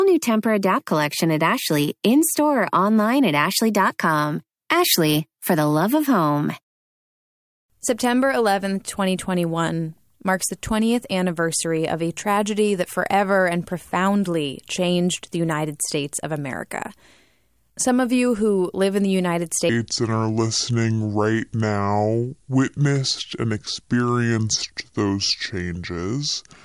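From 19.69 s to the end, wrong sample rate: the speech drops to two-thirds speed and about 7 semitones lower, which fits 48 kHz audio played back at 32 kHz.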